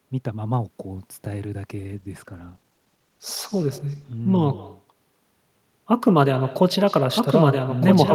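Throughout, an echo with no canceller shadows the speech. A faint, thinner copy about 18 dB down returns roughly 150 ms later. The far end's loudspeaker feeds its microphone.

From 1.7 s to 4.29 s, a call bitrate drop takes hold. The rate falls from 48 to 18 kbps, bottoming out for 2.53 s. The speech turns rough and muffled.

From 7.16 s to the end, a doubled audio track appears. A full-band copy, about 5 dB quieter, trails around one and a half seconds behind. It is likely a second capture path.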